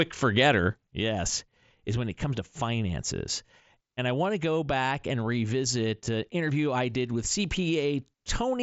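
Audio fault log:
0.87 s to end: sudden gain jump. The level drops by about 6 dB in a single step and stays there to the end, with the speech and the background noise falling together. Unlike a fade or a compressor pulling back, there is no ramp and no recovery, and unlike a talker moving away, the room tone drops as much as the speech. The likely cause is a digital gain setting applied without smoothing. Through the mSBC headset path, nothing reaches above 7.7 kHz, with light grain on both sides of the step.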